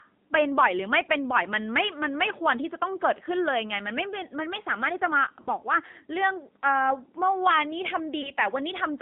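This speech clip went through the AMR narrowband mobile codec at a low rate, which fits 7.4 kbps, so the sound is confined to roughly 200 Hz to 3.7 kHz and has a plainly audible buzzy, synthetic quality. Lost AMR speech frames caused the decoder to stretch and fade the last good sound, producing short warbling dips at 5.42 to 5.48 s (about two 20 ms frames) and at 8.22 to 8.30 s (about one frame).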